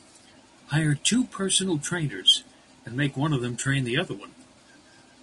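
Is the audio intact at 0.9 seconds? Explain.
No. At 0.9 seconds, as across the whole speech clip, the voice sounds rough and grainy with plainly audible low-delay AAC compression, likely AAC-ELD at a rate consistent with about 32 kbps. Its short frames resolve pitch harmonics poorly, so a spectrogram shows blurred harmonic lines, noise filling the gaps between them, and a thin or patchy top band.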